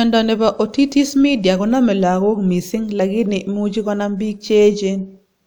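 No technical faults are audible in the recording.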